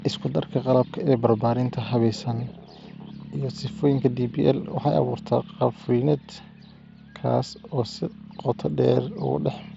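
There are no technical faults to describe in time order; the speech comes through the Bluetooth mSBC headset codec as that link normally sounds.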